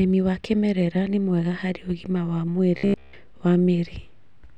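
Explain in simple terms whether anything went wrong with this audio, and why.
Between 2.77 and 3.13 s, new audio was likely arriving too slowly, so the playback software kept repeating a tiny scrap of roughly 15 ms instead of waiting. That causes robotic sound from repeated short buffers. Most of that stretch is made of these repeats, and the looping forces a steady hum at about 67 Hz onto the speech. For that third of a second the voice turns into a stiff, metallic buzz that only loosely follows the words.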